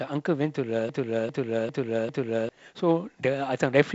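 Short speech clip, wideband phone-style with nothing above 7.8 kHz, where a broken-record loop kicks in from 0.89 s to 2.49 s: a 0.4 s chunk plays four times back to back, likely a stalled player or stream, and whatever should have played there is simply gone.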